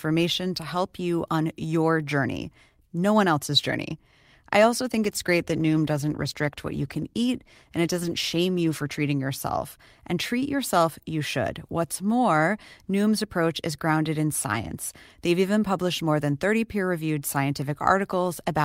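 At 4.97 s, right after "else's journey I also", the speech goes through a call bitrate drop that lasts until 9.07 s. The call's bandwidth estimate fell, so the encoder was given far fewer bits and had to quantise the signal more coarsely. The coarser detail, held at the lowest rate for about 4 seconds, fits a fall from around 64 kbps to roughly 19 kbps. The sound turns rough and degraded until the bitrate recovers.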